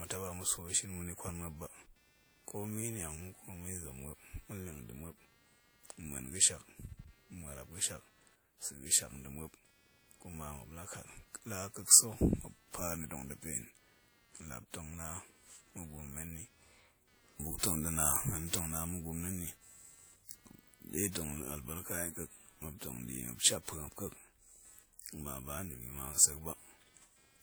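Computer activity noise runs through the whole speech clip, a pulsing interference repeating roughly 200 times per second and sitting about 35 dB below the speech. As the processor, graphics card or mouse changes its load, the current it draws shifts the ground shared with the audio circuit, and that shift enters the signal. It comes across as buzzing, chirping or scratching that rises and falls with the computer's activity rather than with the speech.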